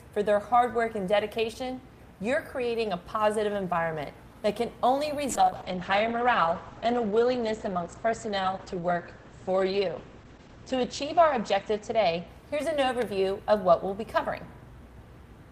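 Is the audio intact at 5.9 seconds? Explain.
No. At 5.9 seconds the sound is rough, watery and muffled, with the top end gone. A call bitrate drop runs from 5.31 to 12.51 s: the encoder fell from 32 to 9 kbps, coding coarsely and cutting bandwidth from 20 kHz to 8 kHz.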